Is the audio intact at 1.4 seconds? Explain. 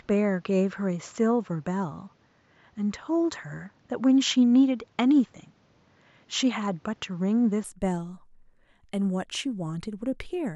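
No. At 1.4 seconds the speech falls inside a stretch from the start to about 7.64 s where the input likely switched to a poorer device, with the recording taken from a lower-grade microphone or headset path. That device passes nothing above about 7.6 kHz, so the speech sounds duller and less crisp, with a faint background noise of its own well below the speech. There is no gap at the changeover and no obvious jump in loudness.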